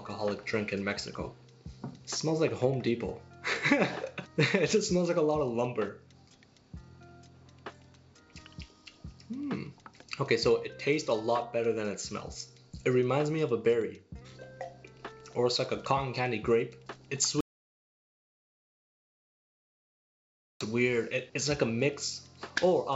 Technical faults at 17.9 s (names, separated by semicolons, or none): audio dropout to silence